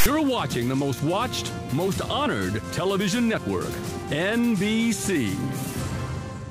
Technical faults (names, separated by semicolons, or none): file tags played as audio